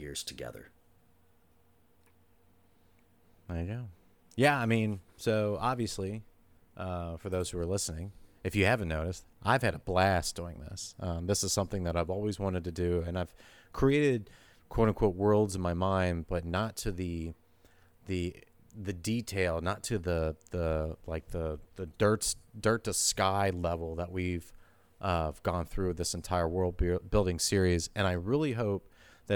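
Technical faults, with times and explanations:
10.55 s, lost LE Audio frame: a very brief rough, hissy blip breaks the speech. One 7.5 ms Bluetooth LE Audio frame went missing, and the LC3 decoder filled the gap by repeating the previous spectrum with randomised signs, smearing its tonal detail into noise.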